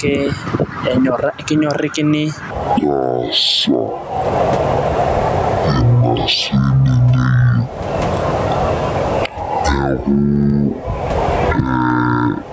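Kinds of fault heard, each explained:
Gain pumping, throughout: the level swings by roughly 20 dB. This squashed, breathing effect likely comes from gain set far too high feeding a fast limiter or compressor.
Section at the wrong speed, 2.51 s to 12.53 s: from around "sidai teneeku olchampa" the audio plays at half speed, dragging and dropping roughly ten semitones in pitch, with speed and pitch falling together, likely from playback locked to the wrong clock.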